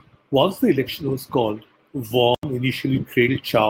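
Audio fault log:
2.35–2.43 s, block of digital silence: the speech drops out completely for about 85 ms and then resumes, cutting out and back without any fade. The gap is long enough to be heard as a distinct hole rather than a tick. Its length fits a 4096-sample buffer, which points to the output buffer going unfilled in time, leaving zeros in its place.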